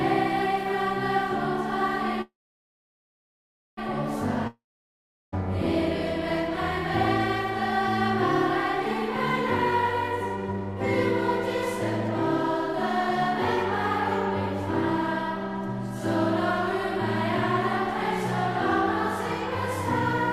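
At 2.21 s the sound hits a call audio freeze: a short fading buzz, then about 1.45 s of silence until 3.79 s, likely packets stalling. Playback resumes where it stopped, now running 1.56 s late. At 4.47 s comes a long network dropout, a brief fading tail and about 0.73 s of silence, likely lost packets. It picks up at 5.34 s with roughly 0.86 s missing.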